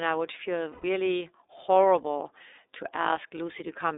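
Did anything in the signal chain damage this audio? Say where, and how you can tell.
Yes. At the codec stage, iLBC coding runs throughout: the sound is confined to roughly 300 Hz to 3.7 kHz with a rough, synthetic edge consistent with 30 ms frames at 13.33 kbps, unlike a plain low-pass filter.

At the network stage, lost iLBC frames from 0.72 to 0.84 s leave a 120 ms held, buzzy vowel-like tone, consistent with four missing frames. Unlike a dropout, the gap isn't silent, and recovery is immediate.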